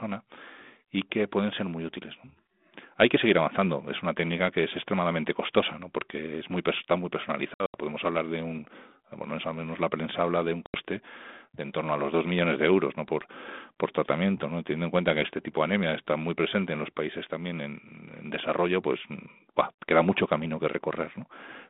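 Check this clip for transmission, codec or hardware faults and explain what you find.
There are two dropouts from packet loss on an ADPCM call, on what sounds like a G.726 line at 32 kbit/s with the usual telephone band of roughly 200 Hz to 3.6 kHz. The first comes at 7.54 s, right after "es muy está muy". About 140 ms goes missing in bursts spread over 200 ms, with the longest gap around 80 ms. The second is at 10.66 s, after "prensa habla de un", and is a single 80 ms hole. Each gap is hard-edged silence. ADPCM only sends differences from a running prediction, so the missing chunks leave the decoder's predictor and step size out of step with the sender's. Speech comes back slightly distorted and settles over the next few tens of milliseconds.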